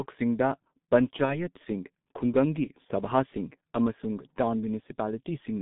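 Throughout, the speech passes through a G.723.1 codec, an early internet-telephony coder that sends only a coarse, slowly updated model of the voice every 30 ms. The squeeze is severe, consistent with a rate near 6.3 kbit/s, and the line band runs only from about 150 Hz to 3.7 kHz. The result is heavily damaged speech: muffled, hoarse and thin, with consonants smeared together and no crisp top end.

From 1.25 to 1.37 s there is VoIP packet loss concealed by the speech codec. Audio went missing in transit, which fits one lost 30 ms frame, and the decoder filled the hole by continuing its last pitch and spectral shape at falling gain. Because each frame leans on the one before, the error lingers beyond the gap itself. The voice briefly turns stretched and artificial, weakens and stays distorted for about a tenth of a second before clearing.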